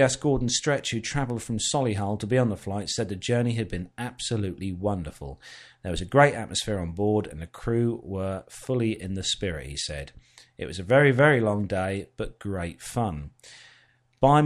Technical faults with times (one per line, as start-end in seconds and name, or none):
none